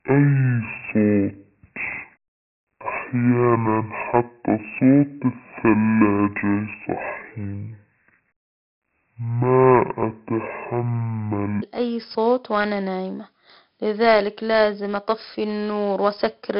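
Speech with heavy 4-bit ADPCM compression throughout: gritty hiss rides every loud syllable, a noise floor tracking the envelope on the spectrogram, nothing above 5.5 kHz, which fits roughly 44 kbps. From 0.0 to 11.62 s there is a section at the wrong speed, playing at 0.516x and about ten semitones low, likely from a clock mismatch; harmonics sit compressed downward and the waveform looks stretched.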